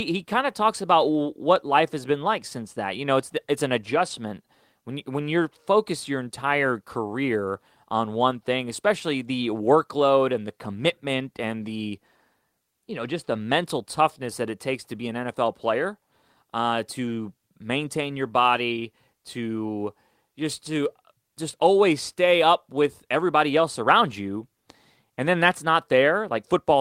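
No audible technical faults.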